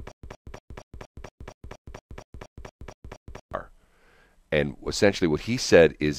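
From the start to 3.54 s, the speech has a stutter with silent gaps. A 115 ms fragment repeats every 234 ms, with 119 ms of digital silence between. It likely comes from a stalled stream retrying.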